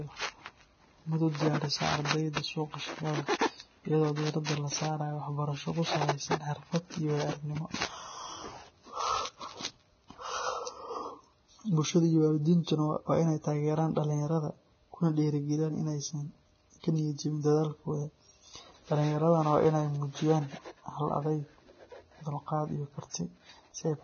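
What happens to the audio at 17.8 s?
At 17.8 s the speech sounds hissy and grainy, with nothing above about 6.6 kHz, as it does throughout the clip. The likely cause is heavy Vorbis compression at a low bitrate, perhaps near 18 kbps, which cuts the treble and quantises what remains so coarsely that fine detail turns to noise.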